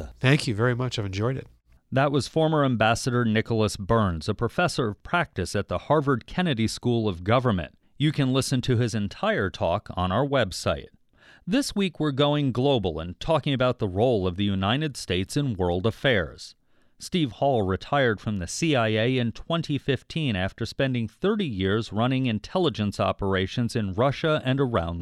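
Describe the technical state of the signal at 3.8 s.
At 3.8 s the speech signal is intact, with no dropout, clipping, distortion or other audible fault.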